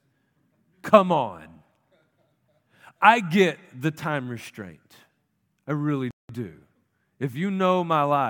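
A speech clip whose sound cuts out abruptly at 6.11 s, just after "I really", falling silent for about 185 ms; a playback stall, likely the player starving for data.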